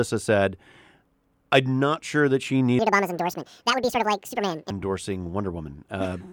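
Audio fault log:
2.79–4.70 s: section at the wrong speed. The speech abruptly turns high and hurried, running 1.86 times too fast and raised by about ten semitones, then returns to normal. Because speed and pitch shift together, this stretch was likely played against the wrong clock.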